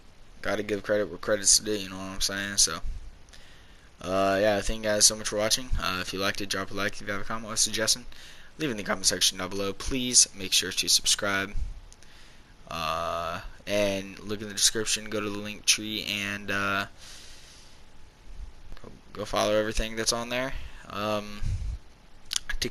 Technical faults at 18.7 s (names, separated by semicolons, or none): DC step